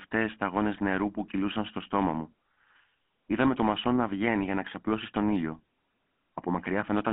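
From start to finish the speech has passed through the GSM full-rate codec, the original mobile-phone coder. It keeps only a vocal-tract model plus a thinned, regularly spaced pulse excitation, and the heavy data reduction, consistent with about 13 kbps, leaves plainly audible damage. Nothing reaches above 3.4 kHz or below about 200 Hz, so the voice sounds narrow and boxy.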